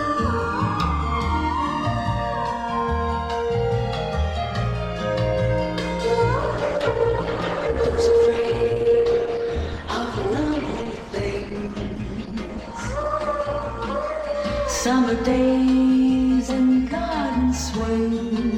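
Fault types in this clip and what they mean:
Channels drifting apart: The two channels run on slightly mismatched clocks, off by a couple of hundred parts per million, so their offset creeps up to roughly 5 ms. Summed to mono, this gives a slow, steadily sweeping flange across the whole clip rather than a fixed comb colouring.
Adaptive stream at a lower bitrate: From 6.35 to 14.35 s the treble abruptly cuts off above 12.1 kHz and codec artefacts thicken, consistent with a switch from about 64 to 16 kbit/s Opus. Unlike a dropout, there is no gap, only a sudden shift in quality each way.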